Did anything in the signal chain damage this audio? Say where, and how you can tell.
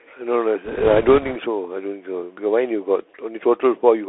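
Yes. The codec stage did plainly audible damage: this speech went through the Bluetooth CVSD headset codec the whole way. The band stops at about 3.4 kHz, s sounds come out scratchy, there's a grainy hiss underneath, and the one-bit delta coding clearly fits a 64 kbps link.

There are also bit errors on the Bluetooth voice link, from about 0.65 to 1.36 s. That stretch picks up a rushing, crackly noise but no sharp clicks, because no flipped bit outweighs the others and each error dies away fast. It sounds like an error rate of a couple of percent.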